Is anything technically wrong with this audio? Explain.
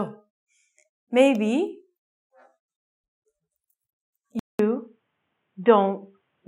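Yes. An input switched to a poorer device at 4.39 s, lasting to the end of the clip. The capture most likely moved from the original input to a narrower-band one, such as a headset's call profile. The sound drops out for 200 ms at the switch, then returns dull and boxy, with nothing above 3.8 kHz. Loudness stays about the same, and a faint new background noise sits well below the signal.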